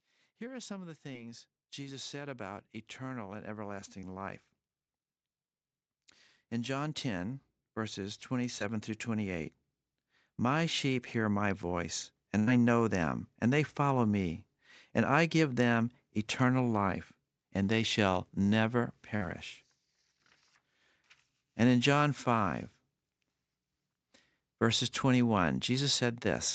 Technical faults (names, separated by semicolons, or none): automatic gain rising; short concealed packet loss; burst of packet loss